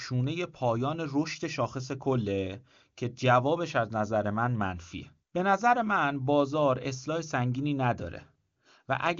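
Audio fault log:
Nothing stood out on listening to this speech recording, which comes across as carried over an AMR wideband (HD Voice) link at a high rate with little or no audible coding damage.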